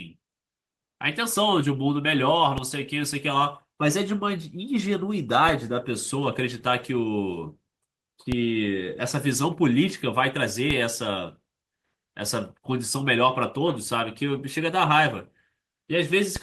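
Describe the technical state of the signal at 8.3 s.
A DC step occurs at 8.32 s: the waveform's zero line jumps abruptly to a new offset, which then drains away as a 5 Hz high-pass would let it. That sudden baseline shift is heard as a brief low thump, while the speech itself carries on unchanged.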